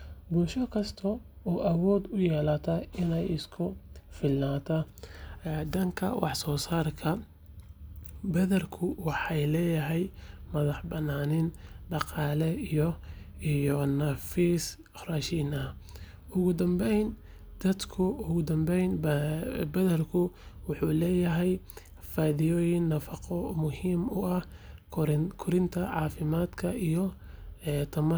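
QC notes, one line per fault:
Nothing stood out on listening to the speech in this clip.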